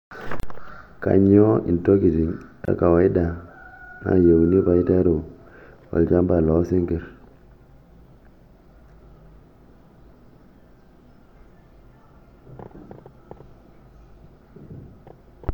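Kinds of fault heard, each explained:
Gap at a join of encoded pieces: brief silences of about 33 ms and 26 ms break the speech, left where separately encoded pieces were joined without trimming encoder delay and padding.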